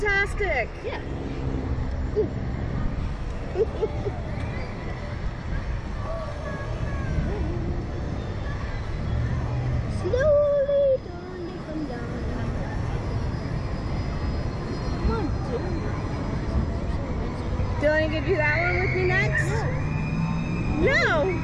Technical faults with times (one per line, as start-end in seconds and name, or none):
none